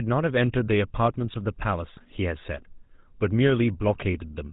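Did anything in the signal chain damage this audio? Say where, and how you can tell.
Yes. GSM full-rate codec damage runs through the whole clip: the speech is band-limited with nothing above 4 kHz and carries the buzzy, gravelly roughness of the 13 kbps GSM full-rate coder. The stage is the codec. The decoder rebuilds each frame from a vocal-tract filter driven by a sparse, regularly spaced pulse excitation, so the fine detail of the voice is replaced by a coarse, rasping texture.

GSM bit errors hit from 3.86 to 4.06 s. For about 0.2 s the speech breaks into squawks, pops and gargling. This is a network-stage fault: with roughly 1% of bits flipped on a weak radio link, corrupted filter, pitch and gain parameters reached the decoder. That bent the spectrum and threw the level around across the affected frames, which fits about nine 20 ms frames damaged in a row.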